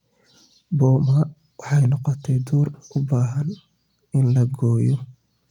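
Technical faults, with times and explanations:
Nothing here stands out as a technical fault; the speech comes across steady and intact the whole way, with nothing to flag.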